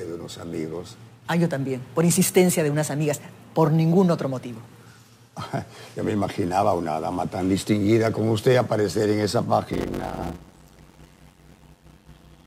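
Block size mismatch (padded), 9.73 s to the end: zero-filled gaps end each short block, causing a 91.9 Hz buzz and 0.533× speed.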